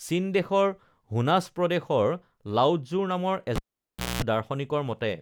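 At 3.56 s the speech breaks with a sharp pop, the sign of a cable pulled and plugged in while live. The signal connection is broken, so the sound drops to near silence for about 618 ms. A rough 60 Hz mains buzz comes in for about 215 ms of that gap. That is the plug tip touching before the ground makes contact. A second pop at 4.22 s marks the plug seating fully, and the speech returns.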